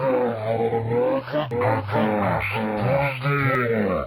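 From about 1.51 s to 3.55 s there's a doubled audio track: a second full-band copy trails the original by roughly 0.7 s, a few dB quieter, dry and uncoloured, cutting in and out abruptly. Likely a slower second capture path or misaligned edit.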